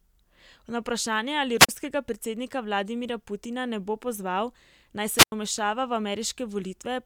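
Speech with two wireless microphone squelch dropouts (1.58–1.69 s, 5.16–5.32 s): hiss rises as the FM signal fades, then squelch mutes 37 and 91 ms, unlike a clean digital gap.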